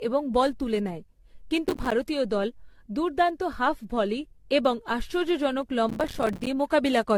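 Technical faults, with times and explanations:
Throughout, generation loss: the speech was likely decoded and re-encoded about ten times at 64 kbit/s AAC-LC, stacking quantisation noise, so it sounds swirly, hollow and smeared, with blurred onsets.
1.67–1.92 s, processor overload crackle: the processor missed a run of roughly 5 ms buffer deadlines, each leaving a hard-edged silent gap, heard as gritty crackle just before "দল দুর্দান্ত হাফ ভলি".
5.89–6.47 s, processor overload crackle: a longer stretch of missed deadlines, several dozen short silent gaps, tears the speech into crackle right after "হাফ ভলি এবং আশ্চর্যজনক".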